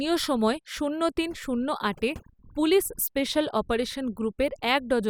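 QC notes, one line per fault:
Throughout: overdone noise removal. Aggressive noise reduction drops bands near the noise floor, leaving near-silent gaps with twinkling specks.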